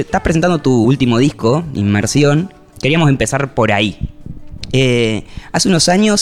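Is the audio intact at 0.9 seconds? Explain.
No. Just before that point, at 0.84 s, compressed frames are skipped: about seven frames of roughly 23 ms each go unplayed, so the audio jumps ahead by about 150 ms. The splice is heard as a sudden jump in the sound. On a spectrogram, the harmonic and noise patterns shift abruptly at a vertical seam. In the waveform, the envelope changes discontinuously there.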